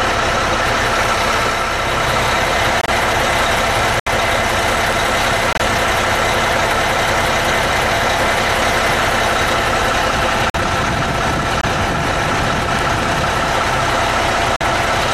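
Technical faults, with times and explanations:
2.81 s, 4.00 s, 5.53 s, 10.50 s, 11.61 s and 14.56 s, corrupt frame muted: flipped bits damaged compressed frames, the decoder rejected them, and the player filled each gap with silence. The sound drops out abruptly for about 87, 81, 90, 60, 36 and 60 ms, lengths of three, three, four, two, one and two whole frames. It resumes on schedule because timing is preserved, so each fault is a hole rather than a shift.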